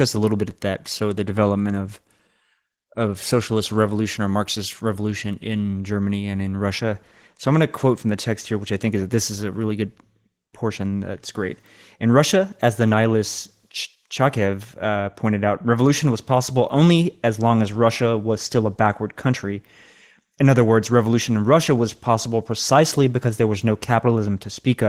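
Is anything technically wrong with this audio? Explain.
Yes. Opus voice compression runs throughout the speech, and the damage is plainly audible. The coder works in hybrid mode, using linear prediction for the band below 8 kHz and a transform layer above it. At a rate that suggests about 16 kbps, the excitation is coded coarsely, so the voice sounds hoarse and slightly robotic, while the band stays fullband, coded in 20 ms frames.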